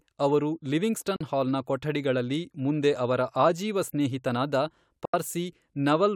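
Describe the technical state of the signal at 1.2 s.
From 1.16 to 1.21 s the speech drops to silence for about 41 ms before "ಹಾಲ್ನ ಕೊಠಡಿಗಳಲ್ಲಿ ಮುಂದೆ ಅವರ", likely a Bluetooth dropout where late packets were discarded, consistent with two lost.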